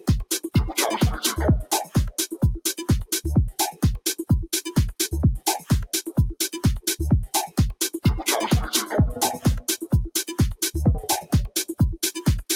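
A noise suppressor designed for speech stays active through the whole clip and treats sustained tones, ambience and reverb as noise to be removed. Its gain keeps swinging by around 10 dB, so attacks pass while held sound and decaying tails sink, making the audio pump and thin out.

From 1.64 to 1.95 s, the noise suppressor misjudges a stretch of sound as noise and cuts it harder than its surroundings, with the deepest drop about 15 dB. Over roughly a fifth of a second in total, the sound audibly dips.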